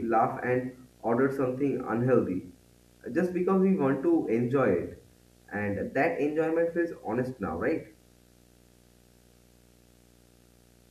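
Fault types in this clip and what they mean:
Video or display buzz: A screen or video cable leaks into the speech path. A 59.94 Hz buzz with hash runs throughout, plus a 15.7 kHz line tone, well below the speech.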